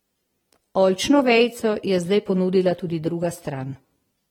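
Speech with AAC compression throughout: the likely cause is AAC-LC encoding at a low bitrate near 46 kbps, which cuts everything above 19.4 kHz and leaves plainly audible codec smearing.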